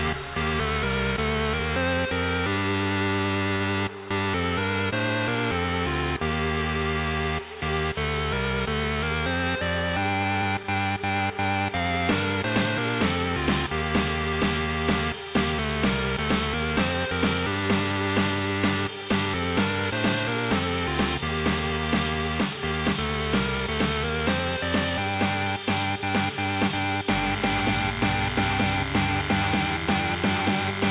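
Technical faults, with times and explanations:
3.56 to 3.62 s, short concealed packet loss: about 40 ms of audio failed to reach the decoder in time on a call path whose band stops at 4 kHz. The receiver covered the gap by extending the preceding sound, following its pitch where it had one or as shaped noise where it did not, then crossfading back into the real signal. This leaves a brief smear or wobble.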